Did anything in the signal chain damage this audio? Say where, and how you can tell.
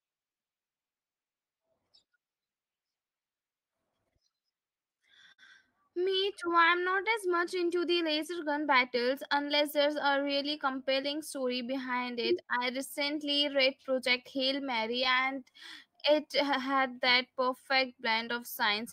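Yes. Throughout the clip the speech drags slightly and its pace feels uneven, as if the talker keeps hesitating for no reason. That is clock drift between sender and receiver, at the driver and buffer stage. The sending device's audio clock runs roughly 5% slower than the receiver's, so the jitter buffer keeps draining. The receiver must keep producing audio at its own rate, so it has to pad out the stream to avoid running empty.

That padding shows up as repeated timing corrections from 0.12 s to 18.80 s. The receiver keeps stretching or repeating tiny slices of speech, leaving the delivery at about 96% of its natural speed and adding around 0.7 s in total. Each edit is small and unevenly spaced, so you hear a faint stumble in rhythm rather than any distinct glitch. All the edits lengthen the audio, which is the signature of a slow sender.

Scattered short gaps, a network-stage fault, appear in three stretches, each with about four small holes. 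From 4.04 s to 5.40 s they are most audible, with the longest around 50 ms, heard as brief smears where a sound is held on unnaturally. From 7.49 s to 9.90 s and from 14.17 s to 15.07 s the holes are only a few milliseconds each, giving faint ticks. In each case packets arrived late or were lost, and the Opus decoder covered the hole by extending the last sound.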